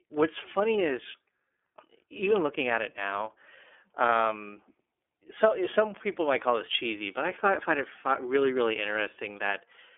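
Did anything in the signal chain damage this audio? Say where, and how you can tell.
Yes. The damage is at the codec stage: the whole clip has passed through the iLBC codec. The speech band sits between about 300 Hz and 3.5 kHz, and nothing appears above 3.7 kHz. On a spectrogram, that shows as a hard ceiling with empty space above it. The speech sounds plainly rough and synthetic. Each 30 ms frame's excitation is coded independently at a low rate, which fits iLBC's 13.33 kbps mode, so fine waveform detail and natural texture are lost.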